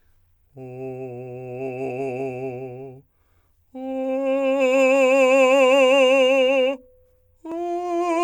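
The music arrives intact, with no technical faults anywhere in the signal.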